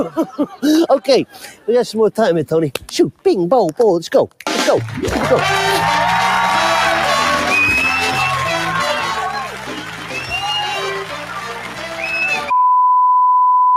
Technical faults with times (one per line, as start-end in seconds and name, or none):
0.00-13.76 noise suppressor applied to music or sounds
1.26-1.68 sound cut by the noise suppressor
9.17-12.51 sound cut by the noise suppressor